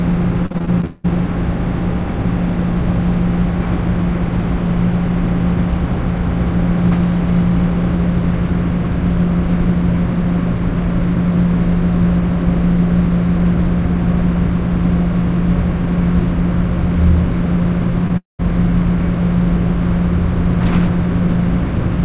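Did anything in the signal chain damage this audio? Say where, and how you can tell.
Yes, the network stage. Between 0.46 and 1.06 s, repeated packet loss (robotic sound) recurs: about seven gaps, the longest about 190 ms, with the receiver patching roughly half that stretch by extending the previous sound. The result is choppy audio with pieces missing.

At 18.08 to 18.11 s, a short concealed packet loss of about 20 ms occurs. The decoder bridged it by continuing the preceding sound and blending back into the real signal, leaving a brief smear or wobble.

From 18.17 to 18.41 s, about 220 ms of audio is missing. A fading continuation of the last sound gives way to roughly 160 ms of silence before the signal resumes without the lost part. This is likely a long network dropout.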